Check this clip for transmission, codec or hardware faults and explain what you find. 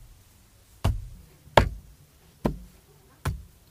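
There's one fault here. From 1.15 s to the end, there's a section at the wrong speed: it runs 1.49 times fast, so everything jumps up roughly seven semitones and hurries. Pitch and tempo shifting together like that is likely a clock or sample-rate mismatch during playback or editing.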